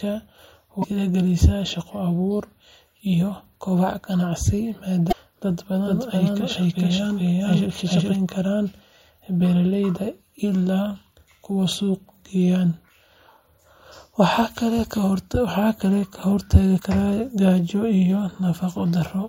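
A speech recording with two kinds of technical fault. Damaged data in a compressed stream appears three times, at 0.80 to 0.84 s, 5.08 to 5.13 s and 16.76 to 16.80 s. Each is a short disruption where the decoder misreads corrupted frames, loses sync and hunts for the next valid header. On a spectrogram each shows as a thin vertical smear of broadband or oddly banded energy that does not match the harmonics around it. From 5.86 to 8.16 s there is a doubled audio track. A second, full-band copy of the speech runs about 0.4 s behind the first at roughly the same loudness, so each syllable is heard again as a dry, uncoloured repeat. The likely cause is the same signal being captured twice through a slower path, or an edit that left two copies out of step. On a waveform, each burst of speech appears a second time, offset by that fixed gap. On a spectrogram, every harmonic pattern is repeated at the same spacing, and the copy starts and stops abruptly at the edges of that span.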